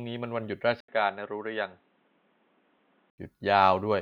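At 0.80 s the speech cuts out for 80 ms, then returns dull and boxy, with nothing above 4 kHz and a new background noise about 40 dB below the signal, at much the same level, until 3.18 s. The likely cause is the input switching to a poorer device.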